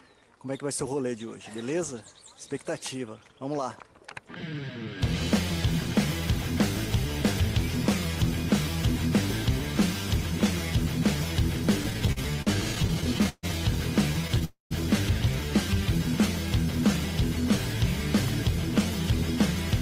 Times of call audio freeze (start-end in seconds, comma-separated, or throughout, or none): 14.45-14.73